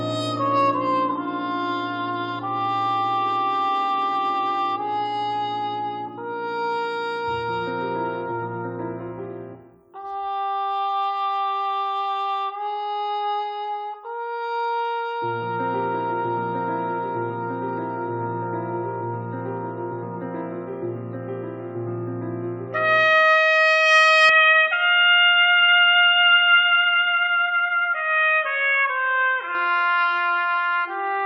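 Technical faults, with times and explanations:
24.29 to 29.55 s, input switched to a poorer device: the sound turns dull and boxy with nothing above 3.8 kHz and a faint new noise floor, likely a narrower-band mic taking over.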